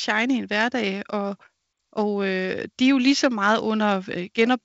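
No audible technical faults here.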